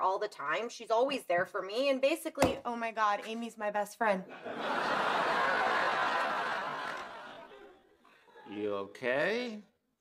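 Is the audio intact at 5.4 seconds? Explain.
No. A time-stretched section runs from 5.34 s to the end at 10.01 s, so 5.4 s falls just inside it. The audio there plays at about 0.63 times its original pace. This was likely done by software lengthening the passage while holding pitch, repeating short fragments to fill the extra time. As a result the pace drops abruptly at 5.34 s with no change in pitch, and the slowed material drags.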